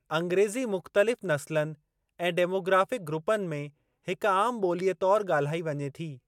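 No technical faults can be heard anywhere in the speech recording, which holds steady in level and continuity throughout.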